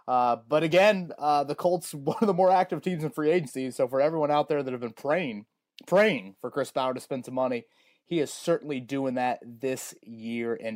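No faults to report: the speech runs without any dropout, glitch or other transmission or processing defect.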